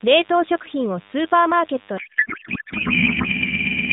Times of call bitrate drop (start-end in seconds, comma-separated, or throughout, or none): none